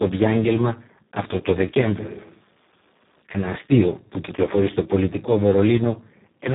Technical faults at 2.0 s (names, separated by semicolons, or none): Speex codec; switch to a distant microphone